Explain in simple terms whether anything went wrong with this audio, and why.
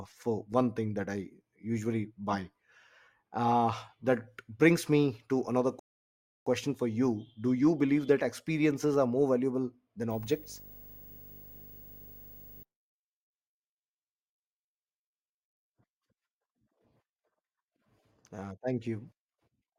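Two things went wrong. First, a rebuffering stall: the player used up all the audio it had downloaded and had to stop and wait for more to arrive. From 5.79 to 6.47 s the speech cuts to silence for about two thirds of a second, then picks up exactly where it left off. None of the speech is missing, but that pause adds 0.67 s to the clip.

Second, video or display buzz: a screen or video cable was close enough to the audio wiring to leak its electrical signal into it. From 10.10 to 12.63 s there is a low buzz at 50 Hz, the rate at which the picture refreshes, with a rough hash on top and a very high, thin whine at 15.6 kHz from the screen's line scanning. It sits well below the speech.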